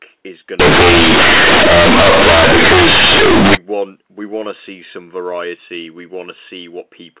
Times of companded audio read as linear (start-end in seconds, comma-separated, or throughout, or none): 0.60-3.55